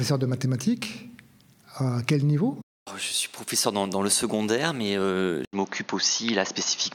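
The sound changes character at 5.45 s, after an 80 ms silence. From there to the end it is duller, with nothing above 6.7 kHz. A new background noise sits roughly 30 dB under it. Loudness stays about the same. The likely cause is an input switched to a poorer device.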